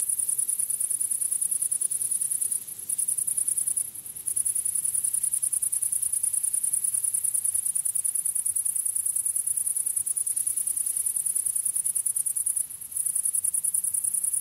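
No technical faults can be heard anywhere in these sounds.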